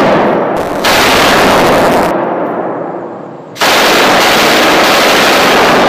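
From 0.56 to 2.11 s, buffer tearing causes a steady 172 Hz robotic buzz. A small slice of each 256-sample buffer replays audio roughly 20 ms old.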